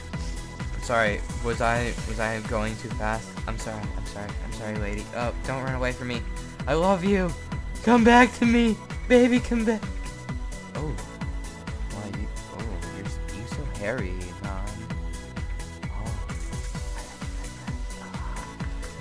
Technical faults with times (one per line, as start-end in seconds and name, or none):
none